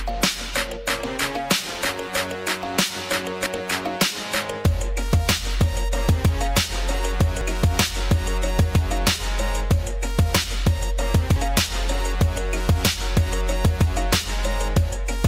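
Audio missing between chunks at 7.41 s and 11.36 s: the sound abruptly skips forward by about 50 ms, likely lost while a 4.0 s recording chunk closed and the next opened.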